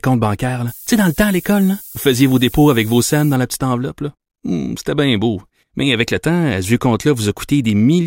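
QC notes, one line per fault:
0.68–3.35 s, low bit depth with noise shaping: the speech is carried on very coarse amplitude steps, consistent with about 6-bit resolution. The rounding error is pushed upward in frequency, so a steady, thin hiss sits over the speech, climbing sharply toward the top of the band and sitting only around 15 dB below the signal. It stops just before "la petite" as full resolution returns.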